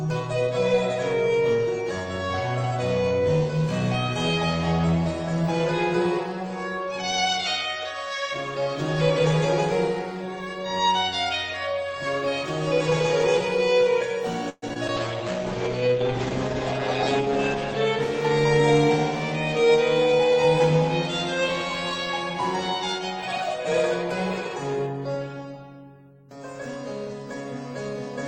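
From 14.49 to 14.90 s the sound turns choppy, with a stuttering quality as small pieces drop out. This is repeated packet loss. Four holes arrive in quick succession, the longest about 129 ms. The receiver patches most of them by stretching the last sound it had, about 170 ms in total, while roughly 60 ms is simply missing. Concealment covers about 42% of that span.

Right after, from 14.97 to 18.62 s, the audio goes muffled and rough, with a watery, coarse texture and the top end gone. This is a call bitrate drop. The audio bandwidth falls from 20 kHz to 8 kHz, and the graininess points to the encoder being squeezed from about 32 kbps down to about 10 kbps. The roughest stretch, at the lowest rate, lasts about 2.3 s before the bitrate recovers and the brightness returns.

From 19.58 to 20.72 s the sound runs about 4% fast while its pitch stays the same. This is a jitter buffer speed-up. 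The buffer holds more audio than it wants. To catch up, the receiver trims short pitch-period-sized slices many times in a row, removing around a twentieth of a second in total. That compresses the timing without shifting the pitch.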